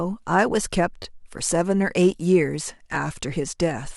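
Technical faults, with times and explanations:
1.02–1.05 s, repeated buffer: a brief buzzy stutter as one piece of about 11 ms sounds three times with hard joins, which fits a 512-sample buffer replayed while new audio arrived late.
2.96 s, repeated buffer: a single sharp click where the same roughly 11 ms buffer plays twice, because fresh audio missed its deadline. Essentially no sound is lost.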